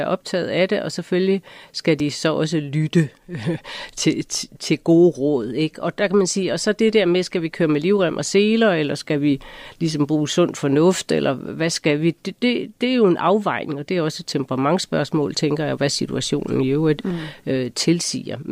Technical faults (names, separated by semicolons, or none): dropped buffer (overrun)